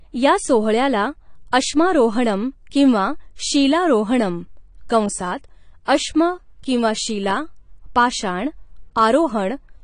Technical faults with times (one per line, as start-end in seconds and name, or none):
0.00-9.83 AAC compression